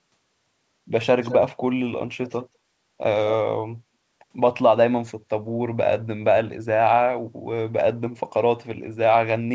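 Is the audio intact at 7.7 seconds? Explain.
Yes, the speech at 7.7 seconds is intact, carrying only the normal character of the call microphone processing and the G.722 call path, with no fault at that moment.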